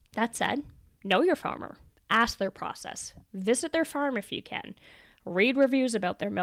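A gain stage overloads by about 1 to 3 dB, producing hard clipping: speech peaks are cut flat at 0.44–0.50, 1.11–1.16, 2.12–2.23 and 5.42–5.64 s, giving brief crackle.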